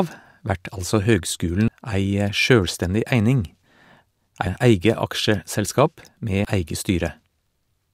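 At 1.68 s and again at 6.45 s the speech is hit by damaged data in a compressed stream. Corrupted bytes make the decoder misread a frame and resync, producing a brief blip that shows as a thin broadband vertical streak on a spectrogram and a sharp discontinuity in the waveform.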